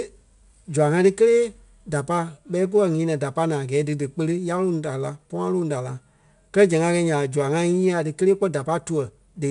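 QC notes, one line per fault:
Throughout, 4-bit ADPCM compression: coarse 4-bit prediction steps leave gritty hiss tracking the speech level and nothing above 10.6 kHz, which fits an 89 kbps stream.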